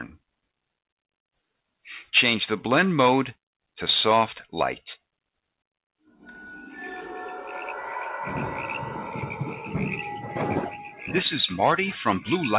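No technical faults are audible.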